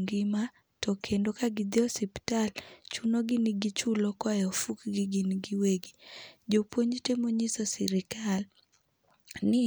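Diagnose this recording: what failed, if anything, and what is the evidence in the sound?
Pre-emphasis was left on between 4.40 and 6.56 s, right after "chunogi ni gichulo koa" and ending before "temo nyiso sirkal". The speech there turns thin and bright, with hissy sibilants. The tilt fits the CD 50/15 µs curve, putting 10 kHz about 8 dB above 1 kHz. The treble boost went in but the de-emphasis that should undo it never got applied at playback, so the top end stays exaggerated for that stretch.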